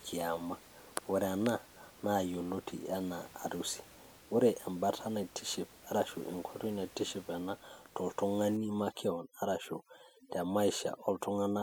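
Overdone noise removal runs from 8.57 s to the end at 11.62 s. The reduction is too aggressive, driving bands near its noise estimate almost to zero: the room noise, about 24 dB down, becomes twinkling near-silence, and quiet speech detail goes.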